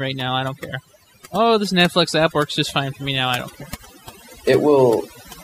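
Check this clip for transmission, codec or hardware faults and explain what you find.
The speech runs through overdone noise removal for its whole length. A noise suppressor set too aggressively cuts individual frequency bands whenever they sit near its noise estimate, taking quiet speech detail with them. Gaps between phrases drop to near silence sprinkled with twinkling specks. On a spectrogram the background shows as scattered isolated dots, and the speech harmonics look ragged at their weaker edges.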